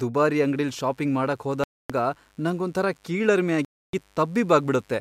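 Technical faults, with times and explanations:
0.31–5.00 s, mains buzz: a steady, raspy 50 Hz buzz with harmonics into the kilohertz range, faint at roughly 40 dB below the speech. It comes from sharp switching spikes leaking in twice per mains cycle, unlike a smooth, pure hum.
1.64–1.90 s and 3.65–3.93 s, Bluetooth stall: the speech cuts to complete silence for 0.26 s and 0.29 s, then resumes, likely because interference delayed packets until the headphone buffer ran dry, rather than from fading or glitchy concealment.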